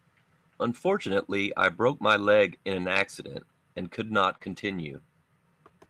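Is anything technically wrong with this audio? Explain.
Yes, there are two kinds of packet-loss fault in this speech.

Lost packets rebuilt from error correction occur at 2.49 to 2.55 s, 4.29 to 4.35 s and 4.42 to 4.80 s. The first two each rebuild about 40 ms, fitting two lost packets. The last rebuilds 200 ms, fitting a run of about ten. In each case the next packet carried a low-bitrate spare copy, and the decoder played that copy instead. The sound never drops out. It turns coarser and noisier, which sets it apart from a smeared or repeated fill.

A short concealed packet loss sits at 4.37 to 4.42 s, where about 20 ms of audio never arrived and no spare copy existed. The decoder stretched the preceding sound across roughly 23 ms and blended back in. The result is a brief smear or wobble rather than a rough, thinned patch.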